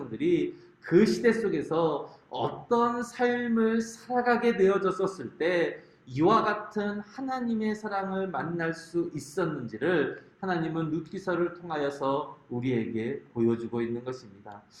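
Nothing in this audio is technically wrong; it contains no faults to place or explain.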